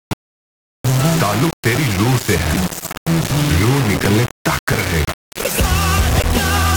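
Throughout the clip, the sound carries a coarse, grainy distortion that shifts with the signal, and the quietest passages sputter or drop out. The likely cause is low bit depth without dither: rounding to 3 bits leaves error only around 10 dB below the signal.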